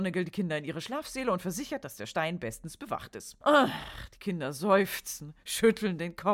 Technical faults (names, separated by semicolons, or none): none